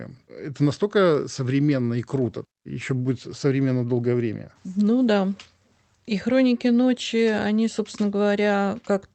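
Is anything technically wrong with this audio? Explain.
No, nothing technically wrong.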